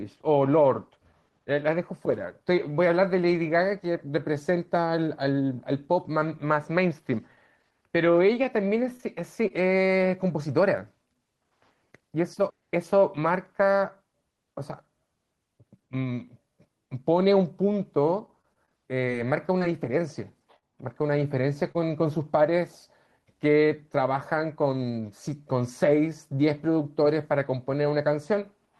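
The speech clip has scattered short gaps between 8.11 and 9.52 s: about seven brief packet losses, none longer than about 20 ms, each patched by extending the preceding sound. They come through as small ticks and smears, and a spectrogram shows thin vertical seams with harmonics briefly frozen. Repeated packet loss (robotic sound) hits 18.26 to 19.62 s, where seven holes totalling 120 ms, the longest 24 ms, are concealed close together. The speech turns choppy, and the waveform shows a run of smoothed, repetitive patches. Short concealed packet loss occurs at 20.58 to 20.64 s and 21.72 to 21.77 s, each losing 20 ms that the decoder filled by continuing the last sound before blending back. Each is heard as a momentary wobble and appears on a spectrogram as a brief smeared stripe.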